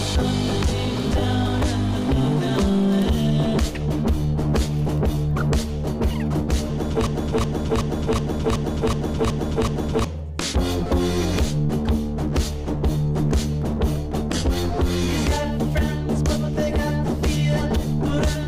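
From 7.07 s to 10.04 s, a 0.37 s fragment repeats eight times back to back, stuttering identically like a broken-record loop. The likely cause is a stalled player, encoder or stream resending its last buffered piece, so the audio due in that span is lost.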